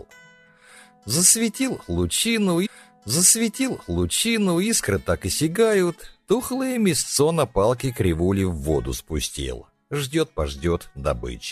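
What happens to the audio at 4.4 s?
At 4.4 s the audio is inside a stream segment repeated, running from 2.65 s to 4.65 s. The player fetched or queued the same chunk of the stream twice, so about 2.0 s of material plays a second time, with a small blip where playback jumps back. On a spectrogram the pattern from that stretch appears twice in a row; the waveform shows an identical block duplicated, joined by a brief discontinuity at the seam.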